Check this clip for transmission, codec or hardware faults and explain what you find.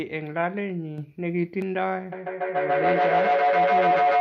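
Two faults are audible. From 0.98 s to 1.62 s there is a sudden gain jump: digital gain likely stepped by about 6 dB with no ramp, so the speech and its background noise lift together abruptly, then drop back just as sharply.

From 2.12 s to the end, a feedback howl takes over: two devices in the same room on one call form a loop that gains on each pass. It narrows into a tone around 700 Hz, with the loop repeating roughly every 150 ms, and peaks about 7 dB above the speech.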